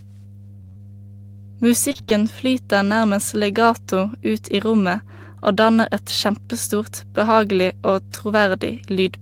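A steady mains hum at 50 Hz runs under the whole speech clip, roughly 20 dB below it. It is a fixed pitched tone, not broadband rumble or hiss. From 1.89 to 2.12 s, repeated packet loss makes the speech choppy and robotic. Short holes, none longer than about 24 ms, are patched by stretching the preceding sound, so nearly half the span is synthetic. This is a cluster of gaps, not a single clean dropout.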